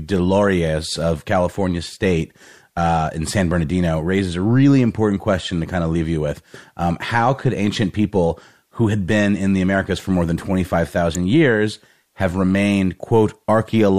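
Speech recording with an electrical switching spike at 11.15 s, just before "years have remained": a sharp snap or tight cluster of clicks peaking around -10 dBFS, likely an arc from a nearby switch picked up by the audio line.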